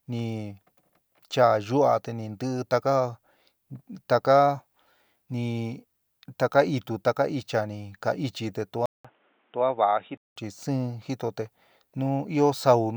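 A speech recording in which the input likely switched to a poorer device from 8.86 to 10.36 s, swapping the capture path to a lower-quality microphone or headset profile before switching back. At the switch there is a silence of about 0.19 s, and then the speech turns dull and boxy, with nothing above 3.8 kHz. It becomes a few decibels quieter and carries its own background noise, roughly 35 dB below the speech, until the fuller sound returns.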